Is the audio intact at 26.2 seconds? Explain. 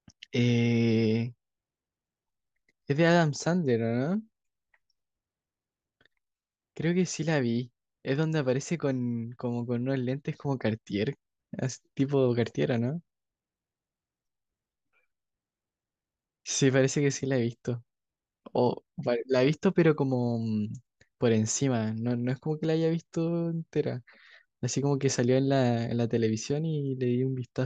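Yes, the audio is intact at 26.2 seconds, with no dropout, click, distortion or other fault at that moment.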